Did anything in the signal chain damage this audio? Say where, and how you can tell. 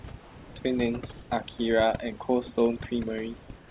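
Yes. Two kinds of damage, both from the call processing stage.

Overdone noise removal runs through the whole clip. The room noise sits about 25 dB below the speech, and the suppressor was set too hard against it. Quiet bands near its noise estimate get pulled down or switched off. Low-level parts of the speech vanish with them. The background drops and breaks up into twinkling specks. The band stops at 4 kHz, which fits a narrowband G.711 call path.

Comfort noise in place of the background appears twice. From 0.22 to 0.56 s, 340 ms of background turn steady and featureless, about 1 dB lower. From 3.58 to 3.7 s, a 130 ms stretch does the same, about 6 dB lower. The background there sits about 24 to 25 dB below the loud parts. The likely cause is discontinuous transmission. The sender stopped sending during pauses, and the receiver filled them with shaped synthetic noise. The real background detail is lost.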